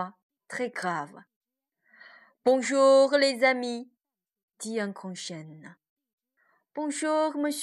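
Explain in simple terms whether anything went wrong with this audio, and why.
Nothing went wrong with this recording; I can't hear any fault anywhere in it.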